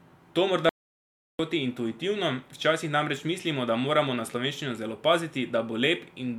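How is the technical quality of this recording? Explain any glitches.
The recording has one clear glitch, an audio dropout to silence. It runs from 0.69 s to 1.39 s, so about 0.70 s of speech is missing. The sound stops abruptly and then resumes mid-flow. The gap is silent, with no room tone underneath. That points to the input signal being lost while recording continued and silence was written. The likely cause is a brief disconnection, a failed link or an accidental mute.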